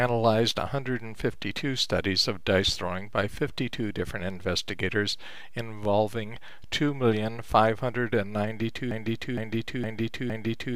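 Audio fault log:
8.91 to 10.76 s, broken-record loop: the player, encoder or stream likely stalled and kept resending the last fragment it held, so a 0.46 s piece of sound repeats exactly, back to back, four times until the clip ends, and the audio meant for that stretch is lost.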